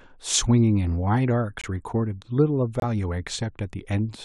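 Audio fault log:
1.61 to 2.83 s, corrupt frame muted. The speech drops to silence twice, from 1.61 to 1.66 s and from 2.80 to 2.83 s. Each hole lasts about 40 ms and starts abruptly. Each length fits a single lost frame. Damaged bits made the decoder reject that frame. The player filled the gap with silence instead of sound. Timing stays intact, so the speech resumes on schedule after each gap.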